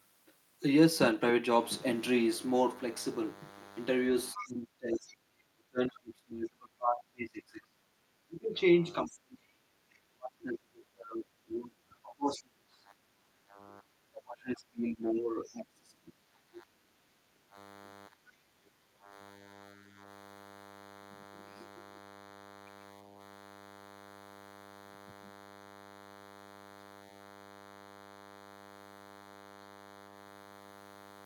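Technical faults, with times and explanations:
1.49 s to end: DECT cordless phone buzz. A steady, thin buzz sits under the speech from 1.49 s onward, about 20 dB below it, pitched at 100 Hz and rich in harmonics. A nearby DECT handset or base station transmits a short radio burst every 10 ms, and the audio circuitry rectifies each burst into a click. Repeated 100 times a second, those clicks fuse into the buzz, which never lets up once it starts.
4.33 to 13.05 s and 14.01 to 17.27 s: speech suppressed in double talk. Through these stretches the talker's speech sinks, thins and breaks into pieces, at worst by roughly 30 dB in the first span and 25 dB in the second, for around seven and two seconds of affected sound. This likely happened because both parties spoke at once, and the echo canceller, unable to tell the local talker from loudspeaker echo, turned everything down together.
4.36 to 5.14 s, 9.06 to 9.12 s, 15.16 to 15.51 s: other side's voice leaking through. 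A second, fainter voice surfaces in scraps: at 4.36 s, around 10 dB under the talker, then a brief trace at 9.06 s, about 25 dB down, and a faint stretch at 15.16 s, about 30 dB down. The far party's speech was likely playing from the talker's loudspeaker into the microphone, with the echo canceller leaving part of it behind.
13.33 to 13.58 s and 16.92 to 19.97 s: background gated by the echo canceller. The room sound ducks, as much as 15 dB, briefly at 13.33 s and for about two seconds of the span from 16.92 s, then returns. While the loudspeaker was active, the echo canceller clamped the microphone hard, pulling the ambient background down with it until it released its grip.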